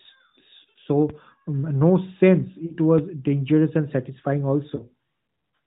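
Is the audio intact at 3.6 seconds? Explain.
Yes, the speech at 3.6 seconds is intact, with no fault at that moment beyond the narrowband sound of the AMR narrowband mobile codec it passes through at 12.2 kbps.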